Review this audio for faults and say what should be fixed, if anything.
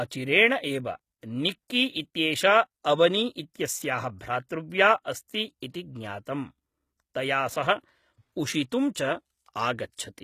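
The speech was likely passed through HE-AAC compression at a low bitrate, consistent with roughly 20 kbps, which codes only the lower spectrum and synthesises the treble from copied bands. Throughout, s sounds come out gritty and lispy, with a metallic sheen above the crossover. Encoding at a higher bitrate, or with plain AAC instead of spectral band replication, would keep the original treble intact.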